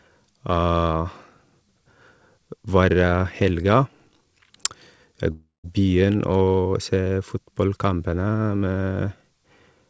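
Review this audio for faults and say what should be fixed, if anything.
Packets most likely stopped arriving for about a third of a second, a long network dropout, from 5.32 to 5.66 s, so roughly 0.32 s of the speech never reached the receiver. The jitter buffer stretched the last sound into a fading buzz, then gave up, leaving about 0.17 s of near-silence before the speech resumed with that stretch gone. The call codec's band limit, with nothing above 8 kHz, is present throughout. Prevention: improve network stability or add redundancy such as forward error correction.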